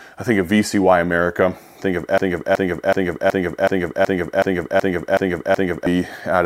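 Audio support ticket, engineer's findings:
Broken-record loop, 2.18–5.87 s. Speech cuts to one 0.37 s fragment repeating back to back, identical each pass, about ten times, then normal playback resumes. Audio that belonged in that window is gone, not delayed. Likely cause: player or stream buffer stalled and kept re-emitting the last held fragment until data returned. Check decoder and network buffer underrun handling for that interval.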